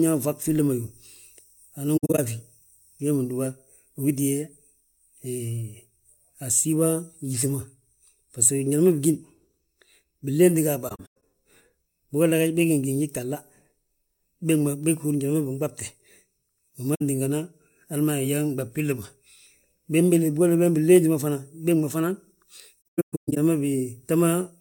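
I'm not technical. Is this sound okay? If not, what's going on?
No, there are four short dropouts. This is AAC frame loss with muting: chunks of the compressed stream went missing, and the decoder filled them with silence, so the speech fades out and back in. They come at 1.97 s just before "a fi", at 10.89 s right after "binlénti ga a", at 16.95 s (a brief blip), and at 22.90 s, the longest, with gaps spread over about half a second.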